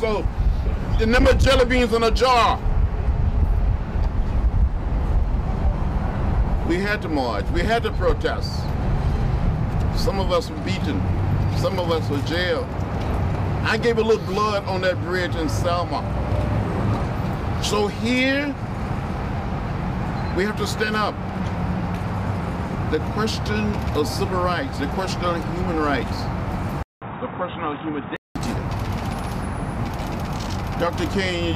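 From 26.83 s to 28.36 s the sound turns dull and boxy, with nothing above 3.8 kHz, drops roughly 5 dB in level and gains a faint new background noise well below the signal, all after a silence of about 0.19 s at the switch. The likely cause is an input switched to a poorer device. A plain low-pass filter or codec bandwidth drop would narrow the band without the gap, level change or different noise floor.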